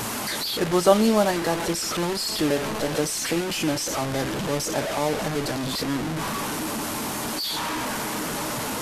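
From start to finish the speech carries a coarse, grainy distortion that tracks the voice, with quiet passages breaking up and sputtering and the error sitting nearly as loud as the speech. The likely cause is low bit depth without dither, with truncation to roughly 5 bits.

From 2.09 to 3.15 s a GSM phone buzz cuts in: a hard, raspy 217 Hz buzz rich in harmonics, steady as from a phone in a call, about 30 dB below the speech and unrelated to it. The audio circuitry picked up and rectified the handset's radio bursts.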